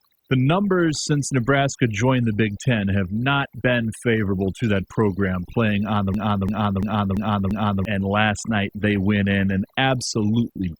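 From the very start the whole clip carries overdone noise removal. The noise reducer was pushed far too hard, so any frequency band sitting near its idea of the noise floor gets pulled way down or shut off entirely. The quieter parts of the speech get dragged under along with the noise. What's left is a near-silent background with little twinkly specks in it.

Then from 6.14 s to 7.85 s there's a system hang loop. The machine or its driver froze, but the audio hardware kept spinning around the same ring buffer and playing whatever was sitting in it. Here that's a 341 ms chunk, which fits a 16384-sample buffer, repeating exactly five times at about 2.9 per second. It comes across as a slow, machine-gun-style stutter rather than a buzz, and roughly a second and a half of real audio is gone.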